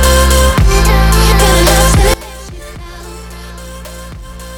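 From 2.14 s to the end, one channel is likely inverted, so shared content cancels in mono, leaving the sound about 20 dB quieter.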